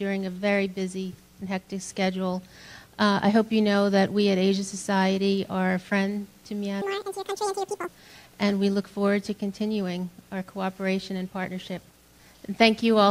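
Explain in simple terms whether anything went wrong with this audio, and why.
From 6.82 to 7.88 s the audio was read two samples at a time (double speed), so it plays twice as fast and a full octave higher.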